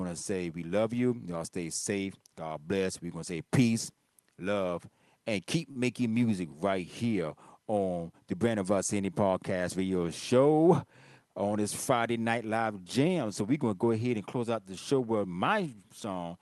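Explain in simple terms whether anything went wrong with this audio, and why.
At 5.71 to 5.78 s the sound briefly hangs and drags. This is a short stall from a late packet: the receiver stretched about 43 ms of sound while waiting, losing nothing.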